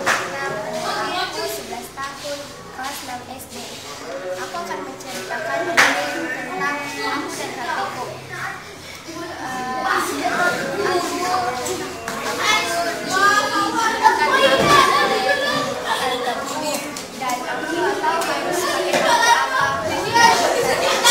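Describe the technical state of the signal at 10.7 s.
At 10.7 s you're hearing crude rate conversion, and it runs through the whole clip. Samples got repeated nearest-neighbour style with no filtering, which fits a 44.1 to 48 kHz jump, leaving an inharmonic gritty fizz roughly 20 dB under the sound, riding on loud and bright parts.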